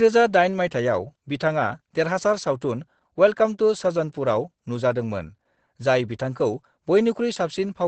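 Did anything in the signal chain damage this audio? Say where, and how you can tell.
Yes, at the codec stage. Throughout the clip, the speech carries Opus voice compression. The band stops at 8.6 kHz, and voices sound muffled, hoarse and slightly robotic where SILK's wideband mode codes the excitation coarsely. That points to a bitrate around 12 kbps.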